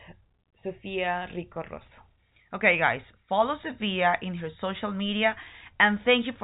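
Nothing here is technically wrong: it's speech on an ordinary G.711 telephone line, with the narrow phone bandwidth topping out around 3.8 kHz.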